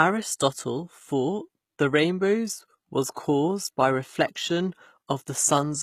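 From start to finish the speech has a treble that stays bright but sounds synthetic: s sounds come out gritty and lispy, and the top end has a metallic sheen that doesn't blend with the fuller lower range. This is likely HE-AAC compression at a very low bitrate, around 20 kbps. Only the lower spectrum is truly coded; the highs are rebuilt by copying lower bands upward, so the harmonics fail to align across the crossover.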